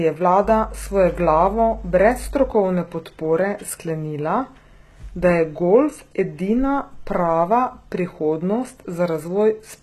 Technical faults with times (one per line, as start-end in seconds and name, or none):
0.00-9.82 HE-AAC compression
0.44-2.51 mains hum